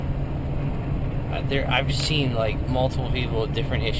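No technical faults can be heard anywhere in this audio.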